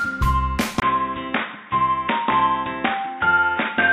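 At 0.8 s the sound drops out for about 20 ms, then comes back narrower and boxier, with nothing above 3.8 kHz. A fresh noise floor sits roughly 35 dB under the signal, and the level barely moves. It's likely the input switched to a poorer device, such as a headset's call profile.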